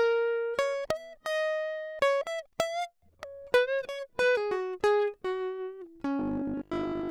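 From 6.19 to 7.09 s the music turns into a rigid metallic buzz at 50 Hz: robotic sound, likely from repeated short buffers of about 20 ms replacing most of the real audio.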